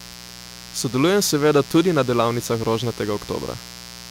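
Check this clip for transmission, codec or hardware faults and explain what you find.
A mains buzz runs under this speech clip from start to finish. It sits roughly 20 dB below the speech. It is built on 60 Hz mains. A dimmer, rectifier or poorly shielded lead injects sharp switching spikes twice per cycle, so energy lands on 120 Hz and its harmonics, stretching into several kHz. It sounds like a steady, raspy buzz. On a spectrogram it shows as evenly spaced horizontal lines spanning the whole clip. The waveform carries a small repeating spiky pattern during pauses.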